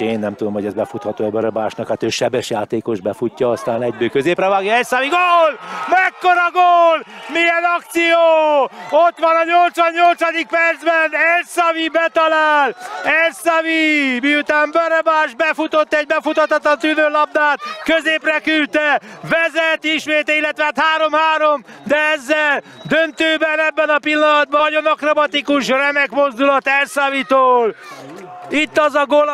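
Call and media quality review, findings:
Stream segment skipped at 24.6 s: sound jumps abruptly forward with a short blip at the join. Likely cause is the player's segment fetch; one chunk failed to load, so playback moved on to the next and that stretch is gone.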